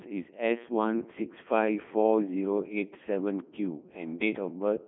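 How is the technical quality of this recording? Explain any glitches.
The technical quality is poor: the speech has been through a very low-bitrate vocoder for the whole clip.

Codec 2 vocoder, throughout: the decoder rebuilds the speech from sine waves using only pitch, voicing, energy and a spectral envelope, so the original waveform is never kept. The heavy damage sounds robotic and buzzy, which fits the top rate of about 3.2 kbit/s. The band is squeezed to roughly 150 Hz to 3.5 kHz, with nothing above 3.8 kHz, leaving it thin and muffled.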